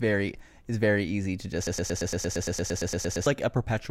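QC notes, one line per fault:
1.67–3.26 s, broken-record loop: a 115 ms fragment of the speech repeats exactly, back to back, 14 times, giving a stuttering repetition in place of the speech, which is lost. This likely comes from a stalled player or stream resending its last buffered fragment.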